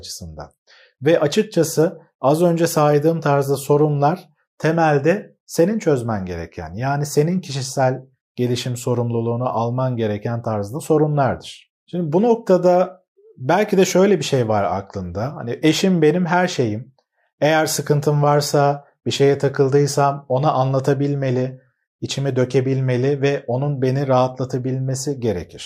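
No technical faults are audible.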